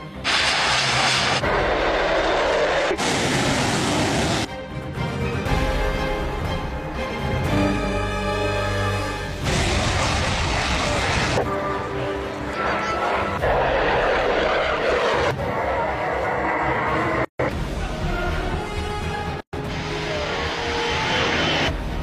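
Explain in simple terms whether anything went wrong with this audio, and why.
Separately encoded pieces were joined untrimmed, causing a gap at a join of encoded pieces: sudden silences at 17.25 s (147 ms) and 19.41 s (125 ms).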